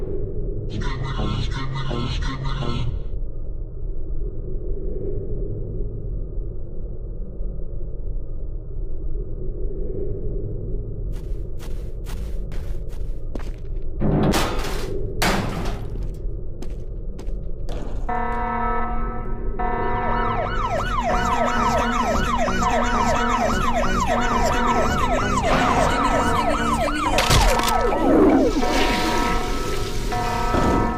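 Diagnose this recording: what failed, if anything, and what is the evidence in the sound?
Nothing failed here; there's no dropout, glitch or distortion anywhere in the recording that would point to a problem at any stage of the chain.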